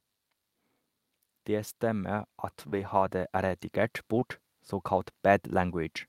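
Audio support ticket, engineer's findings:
Automatic gain rising, 1.46 to 3.69 s. Speech and background noise swell together by about 6 dB over roughly two seconds. Probable component: AGC. It judged the input too quiet and ramped gain up slowly.

Short concealed packet loss at 2.69 to 2.74 s and 4.20 to 4.23 s. Each is a brief smear or wobble. About 20 ms of audio arrived too late for the decoder. The jitter buffer and decoder concealment extended the preceding sound, then crossfaded back into real audio.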